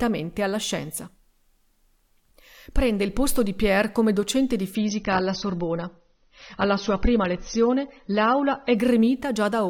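At 4.75 s, right after "come docente di", the speech suddenly loses its top end. This is an adaptive stream at a lower bitrate. The player switched to a cheaper version of the stream, probably because the connection slowed. Nothing remains above about 6.3 kHz. Sibilants turn dull, with more codec artefacts. There is no gap at the switch. The drop fits a fall from roughly 96 to 24 kbit/s AAC. Full quality returns abruptly at 8.75 s.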